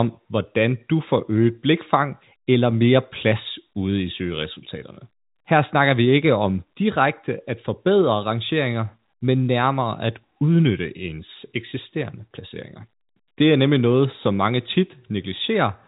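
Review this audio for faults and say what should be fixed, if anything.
Nothing needs fixing: the speech sits in an ordinary G.711 telephone channel, and its top end stops at about 3.8 kHz as that format requires.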